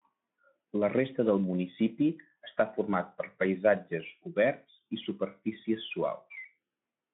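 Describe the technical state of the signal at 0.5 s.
At 0.5 s the speech is intact, with no fault at that moment.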